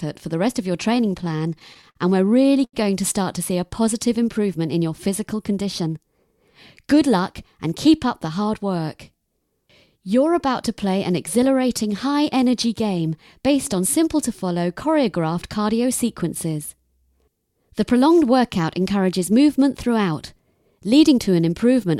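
From 0.95 to 1.97 s the audio has repeated stalls (stutter): packets kept arriving too late for playback, so the jitter buffer emptied ten times in about a second. Each time the receiver extended the last sound, filling 139 ms in total (about 14 percent of that stretch), with the longest hold at 48 ms. Nothing drops out, but the sound drags and catches. On a spectrogram these show as short horizontal smears where the harmonics freeze, and the waveform shows small repeated cycles, slightly faded in the longer holds.

At 2.64 to 2.75 s there is a short stall from a late packet. One packet missed its slot, and the receiver held the preceding sound for 89 ms until it arrived, then resumed where it left off, leaving the stream 89 ms further behind. It sounds like a single sustained moment with a faint buzz or dip. The spectrogram shows one flat, frozen band. The waveform shows a run of near-identical periods.

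Three jitter buffer speed-ups follow, at 5.33 to 5.97 s (107 percent speed), 13.10 to 13.83 s (105 percent) and 16.23 to 16.59 s (108 percent). The receiver had built up surplus delay and trimmed it by cutting tiny pitch-period slices, about 40 to 50 ms per episode. Pitch stays put, but the sound briefly feels hurried. On a spectrogram, features in these spans sit slightly closer together with unchanged harmonic spacing. The waveform shows no visible gaps.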